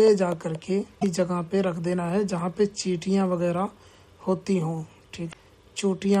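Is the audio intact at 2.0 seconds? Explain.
Yes, at 2.0 seconds the audio is intact, with no dropout, click, distortion or other fault audible at that moment.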